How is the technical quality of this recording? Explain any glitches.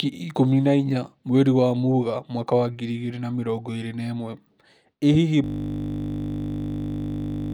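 The recording breaks down badly near the end with a system hang loop. From 5.44 s to the end, the playback system stopped supplying new audio while the sound hardware kept replaying the same ring buffer. One 20 ms slice of the speech repeats about a hundred times, which fits a buffer of roughly 20 ms. Because the slice is so short, it repeats 50 times per second and is heard as a steady, flat 50 Hz buzz rather than a stutter.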